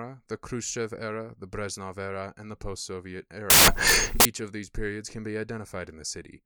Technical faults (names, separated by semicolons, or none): samples built from the wrong bytes